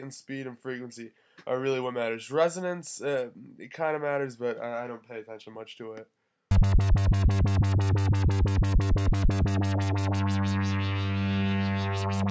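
No technical faults can be heard anywhere in this audio.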